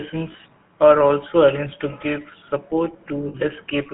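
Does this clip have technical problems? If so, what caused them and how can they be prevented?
Yes. GSM full-rate codec damage runs through the whole clip. The speech is held to roughly 200 Hz to 3.4 kHz, and the encoder's vocal-tract model is driven by sparse, regularly spaced pulses, which gives a plainly audible buzzy, gravelly roughness consistent with 13 kbps full rate. Prevent this by carrying the call over a wideband codec such as AMR-WB or Opus instead of GSM full rate.

Lost GSM frames occur at 0.32 to 0.35 s, just before "are also arranged to", and at 3.28 to 3.35 s, just after "arranged to give support". The decoder repeats the last good frame's settings, so sound is smeared into a brief rough, metallic ring. The first gap fits one lost 20 ms frame and the second fits three frames, about 60 ms. Prevent this by improving radio coverage or link quality, or by adding stronger error protection, so that fewer frames arrive corrupted.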